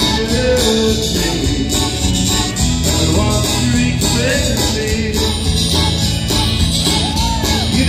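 Nothing in the audio stood out as a technical problem on listening.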